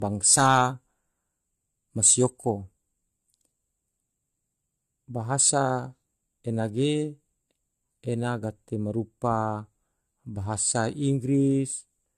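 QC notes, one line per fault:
throughout, generation loss: swirly, hollow speech with smeared onsets, likely from about three AAC-LC re-encodes, fitting 64 kbit/s; spectrogram shows scattered holes, empty above 14.1 kHz.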